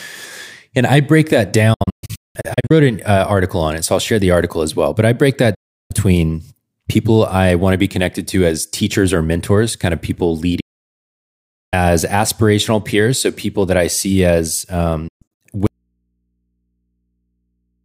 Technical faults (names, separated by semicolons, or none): digital broadcast dropout; audio dropout to a faint residue